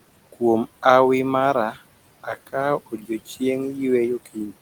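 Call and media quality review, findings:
Noise suppressor artifacts, whole clip. Room noise, which sits about 18 dB under the speech, gets pulled down by about 17 dB in the gaps, then swells back under the talking. Suppressor's per-band gain is pumping frame by frame.

Speech cut by the noise suppressor, 2.86 to 3.10 s. Soft bits swallowed, dipping about 14 dB at worst, around 150 ms affected in total. Suppressor mistook quiet speech energy for noise and ducked it along with the background.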